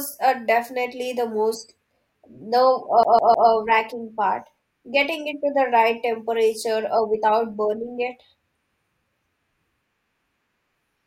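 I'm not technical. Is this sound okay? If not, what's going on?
No. At 3.03 to 3.50 s, the CD gets stuck on one turn: the player keeps jumping back, so the same 0.15 s of speech repeats three times as a quick stutter.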